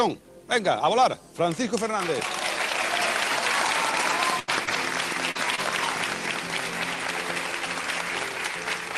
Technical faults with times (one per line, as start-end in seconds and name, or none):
4.09-5.60 repeated packet loss (robotic sound)